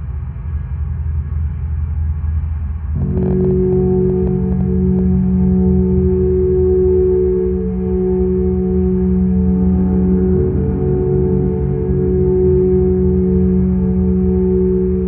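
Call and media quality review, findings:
Train of clicks, 3.02 to 5.00 s. About 15 similar pops, roughly 7.6 per second, unevenly spaced, peaking near the level of the sound itself. Likely interference or a struggling interface injecting repeated pulses. Audible over content and gaps alike.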